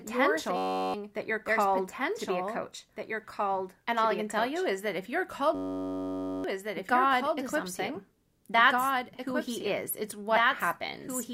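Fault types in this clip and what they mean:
Doubled audio track: A second full-band copy of the speech runs about two seconds behind the original and roughly 5 dB quieter, with no decay or room colour. The likely cause is the signal being captured again through a slower path.
System hang loop: A 10.67 ms slice repeats as a steady 93.8 Hz buzz, fitting a 512-sample buffer, from 0.57 to 0.94 s before "that you're called to" and from 5.55 to 6.44 s after "that if you're called". About 0.4 s and 1 s of audio are lost.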